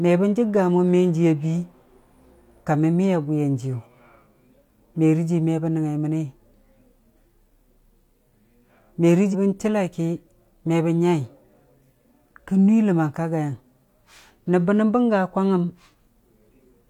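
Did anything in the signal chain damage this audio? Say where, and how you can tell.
Yes. There is damaged data in a compressed stream, at the codec stage, from 9.29 to 9.35 s in this speech clip. For about 60 ms the sound breaks into a brief glitch. That happens when corrupted bytes make the decoder misread frames, lose sync and hunt for the next valid frame header. A plain click from a wiring fault or converter glitch is a single sharp step with no tonal, garbled texture. Network packet-loss concealment smooths or repeats the signal instead of producing garbage.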